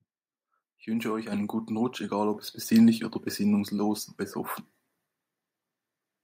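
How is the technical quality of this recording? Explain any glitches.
The recording has one recurring problem: the microphone volume is stepped up three times, at 1.32 s, 2.34 s and 4.5 s, by about 6 dB, 5 dB and 3 dB. Each time, the call software judged the input too quiet and raised the device gain in a single jump. Speech and background noise get louder together, instantly. On a waveform the envelope widens abruptly at each point, and a spectrogram shows a vertical brightness boundary across all frequencies.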